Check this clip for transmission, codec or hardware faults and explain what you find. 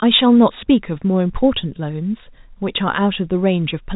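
No transmission, codec or hardware faults turn up in this speech clip, which carries the narrow telephone band of G.711 telephone coding, with nothing above about 3.8 kHz and a faint level-following quantisation hiss consistent with 64 kbps mu-law.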